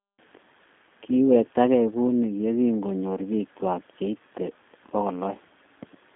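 From start to finish the speech carries the sound of the G.729 codec, most likely the G.729A variant, at a rate that fits 8 kbit/s. The codec rebuilds each stretch of speech from a vocal tract filter, a pitch predictor and a few pulses, so the voice comes out plainly rough and slightly synthetic. The band sits at about 150 Hz to 3.5 kHz. A spectrogram shows a hard ceiling near 3.7 kHz, with empty space above it.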